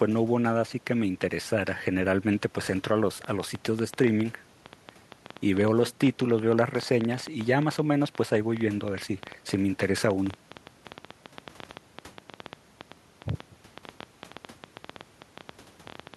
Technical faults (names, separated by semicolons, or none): train of clicks